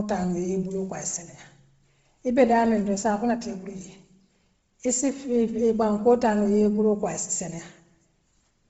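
From start to end, the speech carries heavy codec damage. It sounds like Bluetooth LC3 compression is the likely cause. Nothing sits above about 7.7 kHz, so the top band is gone. The upper spectrum that remains has a breathy, grainy sheen. The coder has dropped that detail and filled the gaps with noise. The damage points to a low bitrate, fitting roughly 24 kbps. It also fits short 7.5 ms transform frames.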